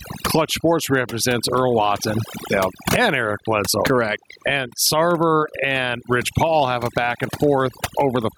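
A noise reduction stage set far too aggressively runs across the whole recording, producing overdone noise removal. Each frequency band that sits near the tool's noise estimate is pushed down hard or shut off entirely, and the quieter parts of the speech fall under that threshold along with the noise. The background drops and breaks up into small twinkling artefacts.

Also present from start to finish is gain pumping, most likely from input gain set much too high with a fast limiter or compressor clamping it back down whenever a loud sound arrives. The level moves by roughly 20 dB, pulled down under each loud syllable. Loud and soft passages end up squeezed close together in level, so the speech sounds squashed and breathes unnaturally.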